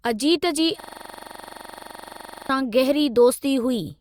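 Speech, interrupted from 0.80 s to 2.49 s by a system hang loop: the machine stalled while the audio hardware kept replaying the same 42.67 ms stretch of its ring buffer, which fits a 2048-sample buffer. That piece repeats about 40 times at 23.4 Hz, heard as a harsh mechanical rattle. On a waveform the same short segment tiles identically across the span; a spectrogram shows identical vertical stripes spaced 42.67 ms apart.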